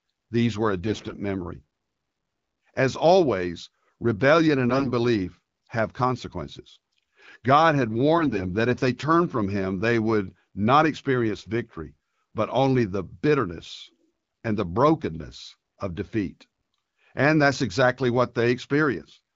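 At 0.86 to 1.15 s, 4.70 to 4.92 s and 8.18 to 8.42 s, AMR bit errors strike the speech. Flipped low-priority bits misplace excitation pulses and skew fine pitch, gain and spectrum values. Pitch and level hold, but the voice turns hoarse and gargly, roughest in the first burst.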